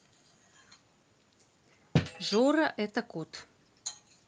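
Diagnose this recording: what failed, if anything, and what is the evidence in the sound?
Nothing failed in this recording.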